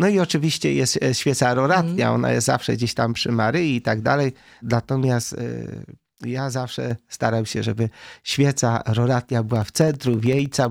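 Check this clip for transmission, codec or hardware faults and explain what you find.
Two faults turn up, both near the back half of the clip.

From 5.23 to 6.91 s the level drops abruptly by about 6 dB, then recovers. That's likely one channel dropping out: with one side of the stereo pair gone, whatever both channels shared loses half its contribution once summed to mono.

From 9.49 to 10.65 s there's a steady run of ticks, about every 64 ms and around twenty in all. These are periodic USB or driver dropouts: something blocks the audio path at a fixed interval, and each time roughly a millisecond is replaced with silence, which you hear as a small click.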